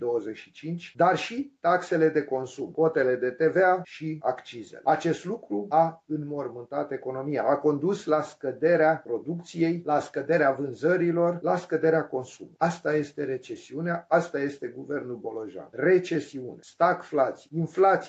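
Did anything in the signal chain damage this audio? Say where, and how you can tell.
No, the sound carries only the ordinary marks of a call path, with the lowest bass trimmed by the call microphone processing and nothing above 8 kHz, a band limit that fits an Opus codec in the WebRTC call path running at a moderate bitrate, and nothing in the chain has damaged it.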